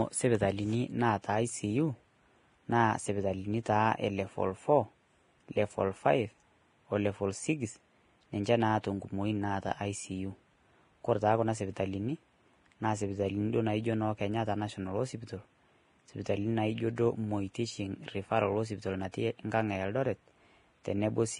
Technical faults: Vorbis compression

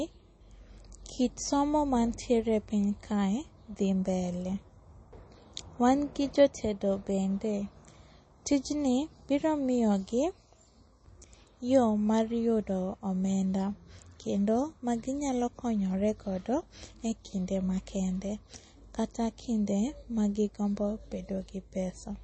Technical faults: MP3 compression

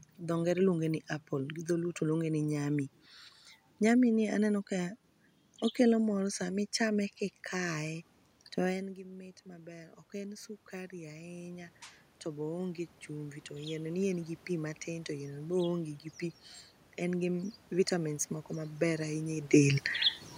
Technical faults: automatic gain rising

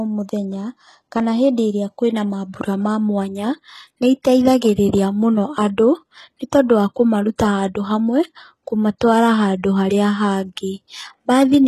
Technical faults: HE-AAC compression

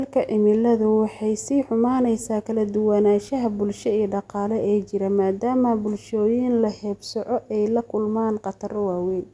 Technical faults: none

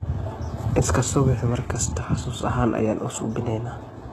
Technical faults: HE-AAC compression

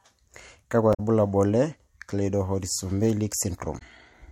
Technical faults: damaged data in a compressed stream

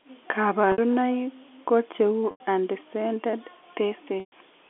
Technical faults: packet loss with pitch repetition

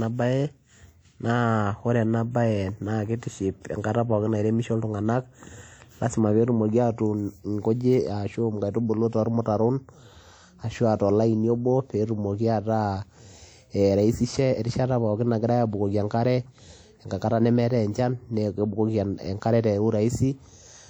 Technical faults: WMA compression

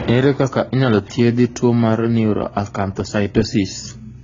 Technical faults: transcoding between lossy codecs

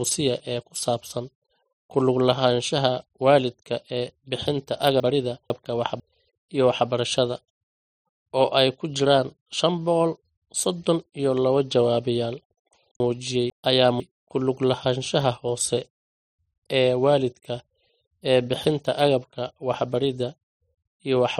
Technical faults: chunks out of order

